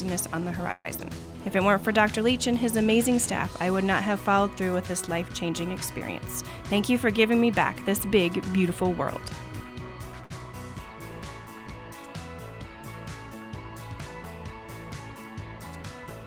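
At 0.71 to 0.87 s there is a call audio freeze, likely from packets held up in transit draining the jitter buffer: the last sound is continued as a fading buzz, dropping to near silence for about 30 ms, before the audio resumes where it stopped. At 0.97 to 1.00 s, short concealed packet loss follows; about 40 ms never reached the decoder in time, so a brief smear is blended in and a sliver of sound is lost. From 6.41 to 8.71 s a jitter buffer speed-up trims excess delay by cutting pitch-period slices, about 150 ms in total, so the sound runs 6 percent fast at unchanged pitch and feels hurried. At 10.24 to 10.32 s, a short stall from a late packet holds the last sound for 63 ms with a faint buzz, then carries on with nothing missing.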